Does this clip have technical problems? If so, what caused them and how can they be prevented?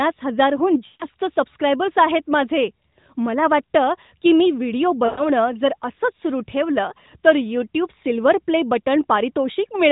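Yes, there are two bursts of lost AMR speech frames, at 0.86 to 1.05 s, between "हजार हून" and "सबस्क्रायबर्स आहेत माझे मला", and at 5.06 to 5.30 s, between "वाटतं की मी व्हिडिओ" and "जर असंच सुरू ठेवलं". Radio errors corrupted the frames, so the decoder stretched the last good pitch and vocal tract settings while fading the gain. The result is a drawn-out, dying sound lasting about 140 ms and 120 ms, which fits runs of roughly seven and six 20 ms frames. Unlike an IP packet-loss gap, it smears and fades rather than cutting to hard silence, and speech resumes briefly weak. The narrowband codec itself, with nothing above 4 kHz, sounds like a light, high-rate AMR-NB mode. Stronger radio coverage or a more robust codec mode with extra error protection would prevent these losses.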